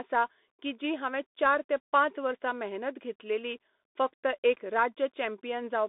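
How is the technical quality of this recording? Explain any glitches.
Poor. The speech runs through a Bluetooth CVSD headset codec from start to finish. The one-bit up/down coder confines it to 200 Hz–3.6 kHz, with nothing above 3.8 kHz, and adds scratchy sibilants and granular hiss. That grit, unlike a clean telephone band-limit, marks CVSD.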